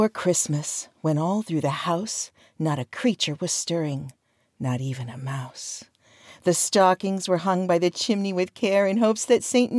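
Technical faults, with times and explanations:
No technical faults are present, so there are no times or explanations to give.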